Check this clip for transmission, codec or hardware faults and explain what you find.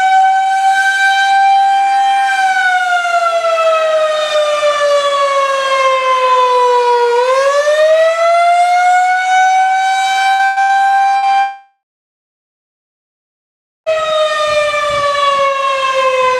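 Two transmission faults are audible: four short bursts of packet loss and one long network dropout.

Burst of packet loss at 10.33–10.42 s, 10.45–10.59 s, 10.62–10.72 s and 11.17–11.25 s: brief held, fading fills replace 60 to 120 ms of missing audio each time, as consecutive packets went undelivered.

Long network dropout from 11.40 to 13.89 s: the sound stretches into a fading fill, then about 2 s of silence before returning with roughly 2.5 s gone. A likely network outage starved the receiver.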